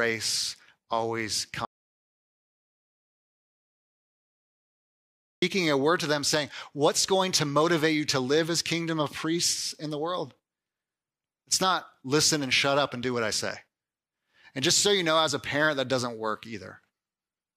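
A speech clip with an audio dropout to silence from 1.65 to 5.42 s: nearly 3.8 s of dead silence, no room tone, most likely a lost input or link.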